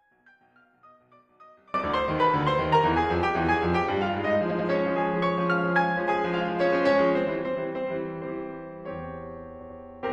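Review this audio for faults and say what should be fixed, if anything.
From 0.00 to 1.74 s the music drops by about 30 dB and turns faint, likely one channel inverted cancelling in mono. Unlike a simple gain drop, the content common to both channels cancels, leaving only a faint copy from the small mismatch between them. Fix it by checking polarity on each channel before summing to mono.

At 4.46 to 4.65 s and 9.57 to 9.76 s, repeated frames make the music stutter as a block of about 93 ms replays. Each event adds about 0.19 s. Unlike dropouts, nothing is missing; the material repeats exactly, which fits whole compressed frames being written three times. Fix it by checking frame sequence numbers so that no frame is written twice.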